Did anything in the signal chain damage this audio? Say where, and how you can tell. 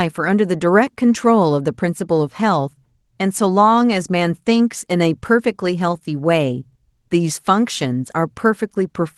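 No, nothing in this speech clip stood out on listening as damage from any stage of the chain, and the call path it passed through sounds as that path normally would.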